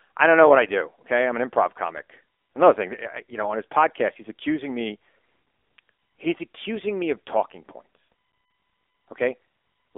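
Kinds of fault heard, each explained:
AMR narrowband mobile codec: speech squeezed through a low-rate mobile codec, sounding buzzy and synthetic, with spectrogram energy confined to roughly 300 Hz–3.6 kHz and nothing above 4 kHz.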